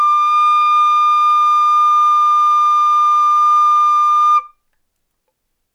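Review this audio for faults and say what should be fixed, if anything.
No faults are audible here; nothing needs fixing.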